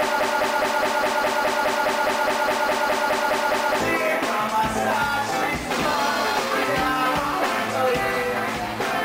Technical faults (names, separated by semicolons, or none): broken-record loop